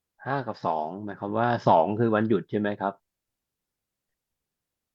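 No technical faults can be heard anywhere in the recording: the speech signal stays continuous and stable throughout, with no interruptions, level jumps or added disturbances.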